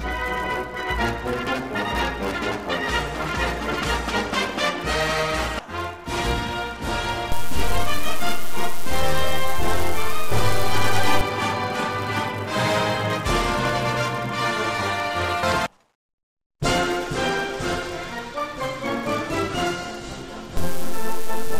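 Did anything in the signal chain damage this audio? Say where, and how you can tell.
Yes. A filter restarted on every block, at the buffer stage, adds a 172 Hz buzz throughout that follows the level. That fits a 256-sample block.

A DC step at the converter shifts the zero line from 7.32 s to 11.21 s, and again from 20.57 s. Each shift thumps.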